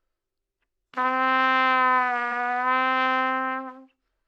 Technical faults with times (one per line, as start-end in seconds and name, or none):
2.28-2.33 repeated frames